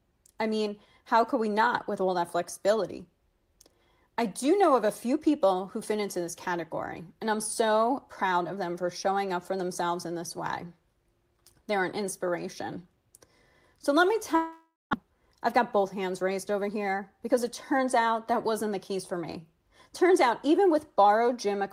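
A long network dropout is the likely cause of the break from 14.35 to 14.95 s: the last sound is stretched into a fading buzz, then about 200 ms of silence, and 400 ms of audio never returns. Unlike a brief packet-loss glitch, it ends in silence and skips ahead. From 15.03 to 17.87 s a jitter buffer speed-up plays the audio about 5% faster to shed roughly 150 ms of backlog, so it sounds hurried while the pitch stays unchanged, which sets it apart from a pitch shift.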